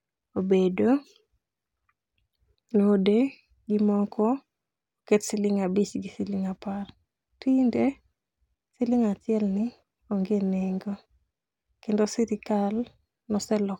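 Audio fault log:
Nothing's going wrong anywhere in this recording, so there's simply nothing to log here.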